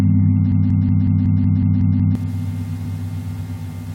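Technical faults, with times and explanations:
0.52 to 2.15 s, broken-record loop: a 185 ms fragment repeats exactly nine times, likely from a stalled player resending its last buffer, so the audio it replaced is lost.
2.85 s, damaged data in a compressed stream: a brief blip as the decoder misreads corrupted frames, loses sync and hunts for the next frame header.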